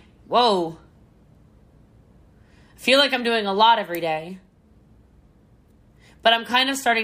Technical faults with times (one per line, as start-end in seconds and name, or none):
none